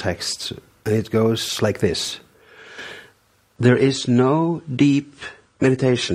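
The audio changes character abruptly at 3.56 s and stays changed to the end. This is an adaptive stream switching to a lower bitrate. There is no gap or dropout at the switch. The quality simply steps down. From that point, nothing above 10 kHz remains, so the top end sounds dull. Codec artefacts also become more noticeable. The change is consistent with the player stepping from around 96 kbit/s AAC to around 32 kbit/s, likely because the connection slowed.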